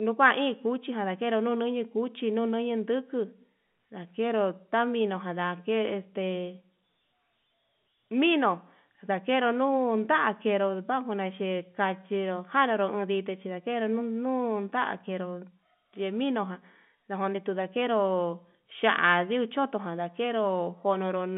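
No faults found: the speech sits in a telephone band of about 150 Hz to 3.5 kHz, consistent with ordinary G.711 telephone coding, and nothing in the audio departs from that.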